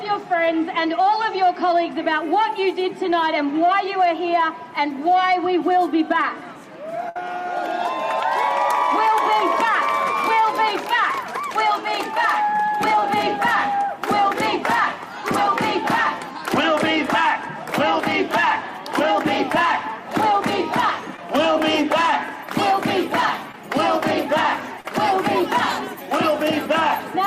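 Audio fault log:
7.09–7.16 s, burst of packet loss: about 60 ms of audio never arrived in time to play. The receiver stretched the last sound across the gap while fading it down, producing a held buzz or fading hiss, and the audio then resumes further on with that stretch missing. On a spectrogram the frame before the gap is smeared sideways into flat, darkening bands. The waveform shows a decaying envelope and then a sudden jump to unrelated material.
12.99–13.03 s, 21.17–21.19 s, 23.52–23.54 s, 24.80–24.85 s, short concealed packet loss: brief holes of about 20, 10, 10 and 40 ms. Each was bridged by continuing the preceding sound and then blending back into the real signal, which is heard as a quick smear or wobble. On a spectrogram each appears as a narrow patch of copied or blurred texture with a soft seam. The waveform shows a short stretch of continued sound where fresh detail should be.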